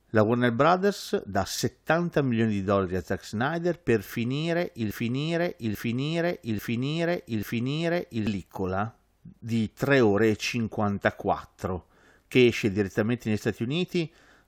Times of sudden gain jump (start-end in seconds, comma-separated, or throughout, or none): none